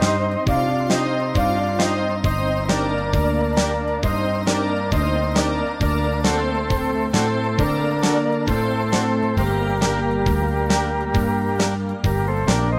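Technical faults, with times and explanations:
No technical faults can be heard anywhere in this clip.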